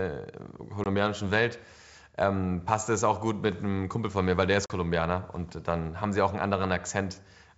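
A speech recording carried over a wideband G.722 link, with packet loss on an ADPCM call at two points: a 20 ms hole at 0.84 to 0.87 s, about one packet, and a 40 ms hole at 4.66 to 4.71 s, roughly two packets, right after "von mir weil der". Each gap is hard-edged silence. On resumption the decoder's adaptive predictor and step size no longer match the sender's, so the speech returns with brief, slight distortion before it resyncs.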